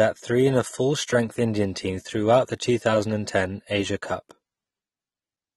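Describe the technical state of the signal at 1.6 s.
At 1.6 s the speech carries AAC compression damage, present across the whole clip. The artefacts likely come from heavy AAC-LC coding, fitting roughly 32 kbps: a lowered high-frequency cut-off and sparse spectral bands leave the sound dull and smeared, with warbling, fizzy sibilants.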